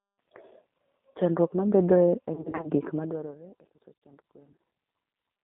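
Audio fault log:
Throughout: G.729 codec at 8 kbit/s, band-limited to about 200 Hz to 3.6 kHz; speech rebuilt from filter and pulses sounds plainly rough and synthetic.
2.35 to 2.70 s: VoIP packet loss concealed by the speech codec; about 160 ms lost in short gaps over 280 ms, extrapolated into a fading tone or coloured noise with weak recovery.
4.01 s: VoIP packet loss concealed by the speech codec; 40 ms gap filled by extrapolated pitch, a brief smear before the signal rebuilds.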